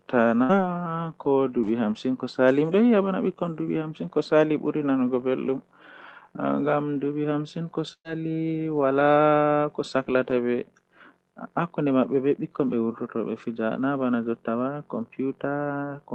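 A burst of packet loss hits at 0.43 s, then 7.93 s. The last sound fades out. About 60 ms, then 120 ms, goes missing.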